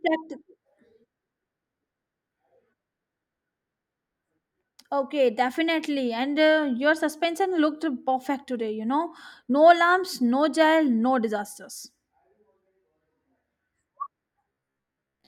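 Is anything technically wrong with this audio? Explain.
Yes, right at the end. From about 14.49 s to 15.27 s the voice collapses into robotic sound from repeated short buffers: a stiff, metallic buzz pinned at about 66.8 Hz that still loosely follows the speech. The likely cause is audio arriving too slowly, so the software keeps replaying the last chunk, which fits a loop of roughly 15 ms, and real audio gets skipped in between. Most of that stretch is repeated material, which is why the pitch sounds so rigid.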